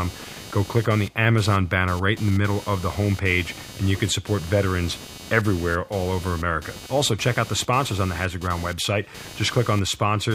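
From start to finish, computer activity noise buzzes beneath the speech at roughly 300 pulses per second, about 20 dB down: processor or graphics load is disturbing the shared ground. A spectrogram would show faint harmonic striping that ignores the speech formants.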